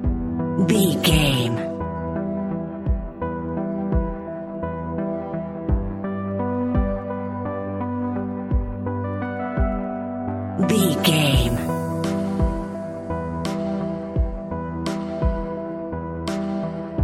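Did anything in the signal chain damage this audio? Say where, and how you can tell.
Yes. Clock slip clicks run from 0.20 s to 17.01 s, roughly ten faint ticks per second. Their steady rate points to a likely clock mismatch of around 200 ppm between unsynchronised converters, each slip dropping or repeating one sample. Unlike buffer dropouts, they leave no gaps.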